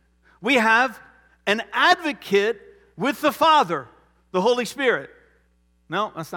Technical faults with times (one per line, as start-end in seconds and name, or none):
none